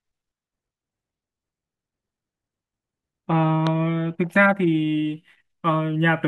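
At 3.67 to 3.69 s, a single loud pop jumps about 10 dB above the speech. A likely voltage pulse from a plug or switch causes it. The speech continues underneath.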